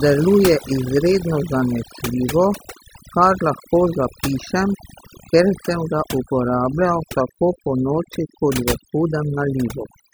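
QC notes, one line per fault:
throughout: overdone noise removal, where noise reduction set too aggressively gates bands near the noise floor, leaving near-silent gaps with twinkling specks.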